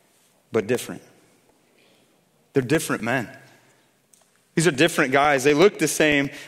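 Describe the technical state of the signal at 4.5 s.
Periodic USB or driver dropouts run from 0.12 to 6.37 s. Every 0.125 s roughly a millisecond of speech is replaced by silence, heard as regular ticks.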